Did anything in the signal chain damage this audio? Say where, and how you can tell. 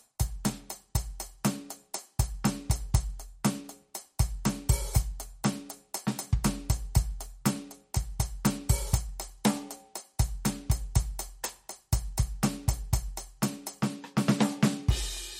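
Yes. Throughout, the music sounds watery and swirly, with smeared attacks and nothing above 16.2 kHz. This is likely MP3 compression at a low bitrate, around 48 kbps.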